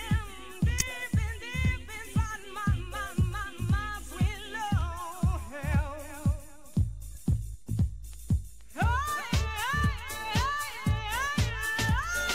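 A corrupt frame decoded at 0.79 to 0.82 s: flipped bits in one compressed frame were played back anyway, so misread codes threw energy into the wrong frequencies. It is heard as a short, fairly loud blip of noise lasting about a single frame.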